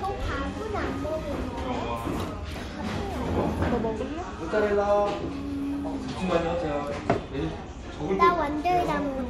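No technical faults can be heard anywhere in this recording of sounds. Nothing in how the audio was captured or carried draws attention to itself at any point.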